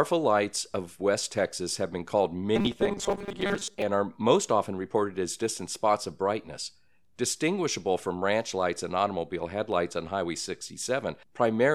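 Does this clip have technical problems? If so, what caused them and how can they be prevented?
Yes. Robotic sound from repeated short buffers runs from 2.56 to 3.82 s: the speech turns into a rigid, metallic buzz near 200 Hz that still roughly tracks the words. The likely cause is audio arriving too seldom, so the playback side filled the gaps by looping the last few milliseconds. A 200 Hz buzz fits a repeated segment of about 5 ms, and roughly half of this stretch appears to be repeats rather than real audio. Prevent it by enlarging the jitter or playback buffer and fixing the delivery stall, so fresh audio always arrives in time.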